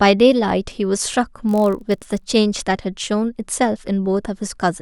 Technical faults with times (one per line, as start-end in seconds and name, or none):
1.47-2.27 block size mismatch (padded)